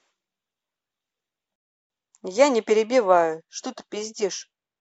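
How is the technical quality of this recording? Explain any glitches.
A single glitch interrupts the speech. Rebuffering stall at 1.56 to 1.90 s: playback ran dry waiting for data, so the audio drops to silence, then resumes seamlessly, adding 0.34 s without losing anything.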